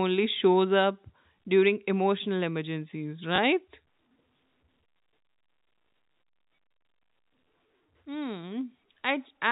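Right after "up during emotional emergencies", at 3.36 s, there's packet loss with the last packet repeated: a 20 ms gap gets filled with a replayed chunk, giving a small blip. At 7.06 s a 40 ms run does the same, buzzing briefly at the 50 Hz packet rate through the telephone-band G.711 audio.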